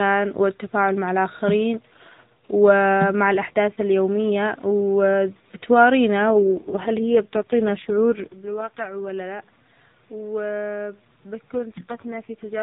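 From 6.18 to 9.10 s, and again from 11.54 to 12.62 s, the speech goes through an AMR rate drop. The network has pushed the codec down to a lower mode, which sounds like the step from 12.2 kbps to 4.75 kbps. Fewer bits are left to code the voice, so it turns buzzy and synthetic. A spectrogram shows the same band, still capped at 4 kHz, with no gap, but the harmonics go blurred and smeary. The waveform stays continuous.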